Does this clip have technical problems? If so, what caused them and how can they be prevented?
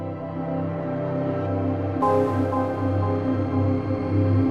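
No, no technical faults heard.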